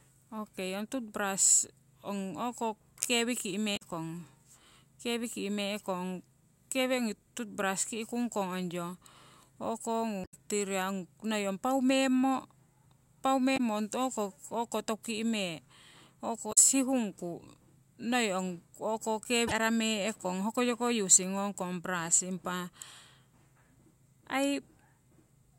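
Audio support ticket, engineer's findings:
Damaged data in compressed stream: 3.73 s (after "toothbrush ong o'ko kewi"), 10.21, 13.54, 16.49, 19.44 s. Brief 60–130 ms glitches; corrupt frames throw decoder out of sync until it finds the next frame header.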